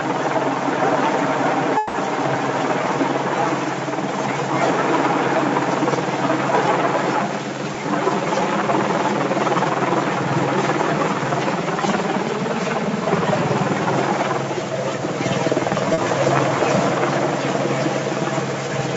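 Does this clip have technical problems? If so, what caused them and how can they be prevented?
Yes. At 1.77 to 1.96 s there is a call audio freeze, likely caused by packets held up in the network long enough for the jitter buffer to run dry. The receiver filled the gap by carrying the last sound forward for about 170 ms as a fading buzz or hiss, then resumed exactly where it had stopped, so nothing is lost but the sound is pushed later. A larger or more adaptive jitter buffer on a steadier connection would prevent it.

At 15.94 to 16.00 s a short stall from a late packet occurs: one packet missed its playout time, the buffer emptied, and the receiver stretched the preceding sound by about 40 ms until it arrived. This is heard as a briefly held sound with a faint buzz or dip before the audio continues from the same point, with nothing skipped. Reducing network jitter or keeping a little more buffer headroom would prevent it.

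The audio also passed through a call codec whose content stops at 8 kHz, which is normal for that path.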